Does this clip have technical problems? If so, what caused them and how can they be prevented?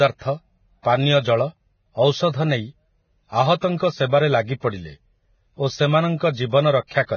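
Yes. The speech sounds hissy and grainy throughout, with nothing above 6.6 kHz; this is likely heavy Vorbis compression, at a bitrate that fits roughly 16 kbps. Encoding at a higher quality setting would prevent it.

A brief hiss smears ahead of sharp onsets, from 0.82 to 0.85 s and from 4.60 to 4.63 s, about 25 ms each. This is pre-echo: quantisation noise spreads across a transform block into the quiet before each attack. A higher bitrate, or an encoder with better block switching, would prevent it.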